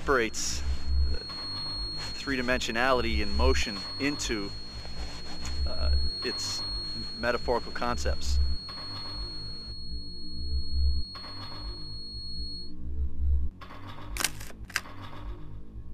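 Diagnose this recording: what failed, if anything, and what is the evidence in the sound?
A thin feedback whistle at 4.3 kHz sits about 10 dB under the sound from 0 to 12.75 s, likely a speaker-to-mic loop hovering right at the edge of ringing.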